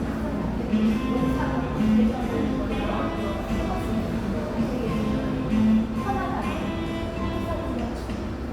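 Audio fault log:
Nothing stood out on listening to these sounds.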